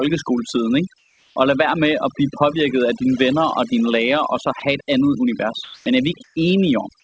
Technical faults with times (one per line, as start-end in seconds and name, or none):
0.00-7.04 overdone noise removal
0.98-1.36 comfort noise in place of the background
4.60 sound dropped by the voice detector
5.64-5.86 comfort noise in place of the background
6.24-6.36 comfort noise in place of the background